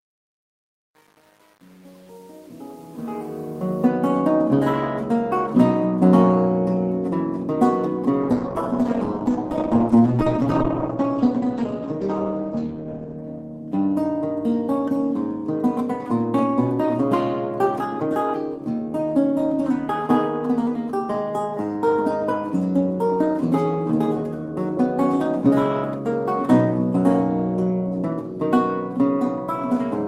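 A fade-in stage that keeps too few bits and adds no dither causes truncation distortion on the fade from the start to 3.87 s, consistent with an 8-bit path. From 0 to 3.61 s the quiet, rising level collapses into coarse square steps and sounds gritty before the level smooths out. At 8.27 s the call's bandwidth estimate falls, producing a call bitrate drop: the encoder goes from 32 kbps to 11 kbps, stays at the lowest rate for about 4.9 s, and recovers by 13.28 s. During that stretch the audio turns rough and watery, and the top end is cut from 20 kHz to 8 kHz, so it also sounds muffled.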